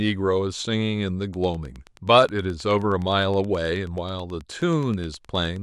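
From 1.34 s to 5.57 s a train of clicks runs under the speech: a steady ticking at about 9.5 clicks per second, evenly spaced, around forty in all. Each click has much the same sharp shape and peaks at roughly the level of the speech itself, so the pulses stay plainly audible through the words and in the gaps between them. The likely source is interference from nearby equipment or a faulty connection or power supply injecting a repeated pulse.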